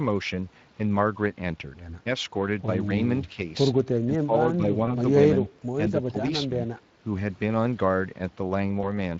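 Throughout the clip the speech carries Speex codec damage that is plainly audible: a hoarse, noisy grain on voiced sounds. This points to a mid-rate setting of roughly 20 kbps, where the CELP excitation is coded too coarsely to keep the voice clean. Because the colouring is constant rather than tied to particular moments, it comes from the codec itself and not from network trouble.

From 4.06 to 4.33 s, and again from 4.57 to 4.74 s, the voice is pulled down in short patches. The first drop is deep, around 15 dB, and the second is only a few dB. This is most likely speech suppressed in double talk: an echo canceller, unable to tell the talker from the far side's loudspeaker echo, turned the voice on the loudspeaker side down. It differs from packet loss because the sound stays natural and is only quieter or thinner, with no invented tone.

At 4.85 to 4.95 s and 8.81 to 8.91 s there is VoIP packet loss concealed by the speech codec. 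Each time, about 20 ms of audio went missing, which fits a single lost packet. The decoder filled the gap by extending the last pitch and filter, stretching the sound out as it faded. The damage lingers for roughly 100 ms, longer than the gap itself, because each decoded frame builds on the one before. That stretched, fading sound is what marks it apart from the clean level dips of the double-talk suppression.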